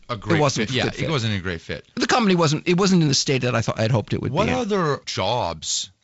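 No audible technical faults.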